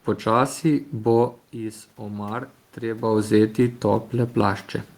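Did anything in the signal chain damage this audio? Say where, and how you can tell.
Yes. Between 1.51 and 3.32 s the level swells by about 3 dB over nearly two seconds. This is automatic gain rising in the call processing stage: after the input dropped by about 10 dB, the gain control judged it too quiet and slowly turned itself up. What separates it from the talker simply moving, as happens around 1 s and 3 s, is that the room noise climbs along with the voice.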